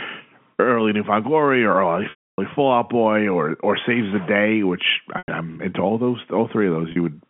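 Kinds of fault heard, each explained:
Packet loss with pitch repetition: The shortest dropout, at 6.92 s, sounds like a briefly held buzzy tone. The 100 ms gap at 5.18 s and the 280 ms gap at 2.10 s hold, fade to silence, then cross-fade back. Missing packets, which fits 20 ms packets, were bridged by repeating the last pitch period.
Stuck bit: From 3.75 to 4.29 s the speech carries a distortion that rides on the waveform. The likely cause is one data bit held at a fixed value, throwing about half the samples off by that bit's weight.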